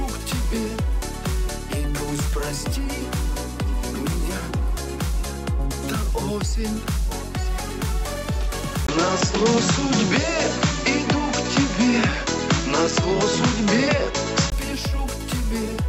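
At 8.87 s a 20 ms gap is followed by a narrower, duller sound with nothing above 7.6 kHz, a level shift of around 5 dB and a new noise floor well below the signal, lasting until 14.52 s. The likely cause is the input switched to a poorer device.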